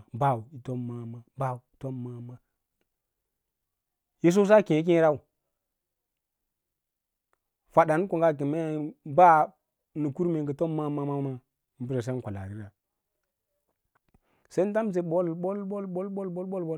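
No dropouts, distortion, noise bursts or timing glitches turn up anywhere in this speech recording, and nothing in it calls for a fix.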